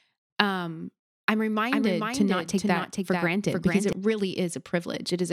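A second, slower capture path or a misaligned edit is likely feeding this speech clip twice. From 1.71 s to 3.93 s, just after "um I'm", a doubled audio track appears: a dry, full-band copy about 5 dB quieter trails by roughly 0.4 s, starting and stopping abruptly.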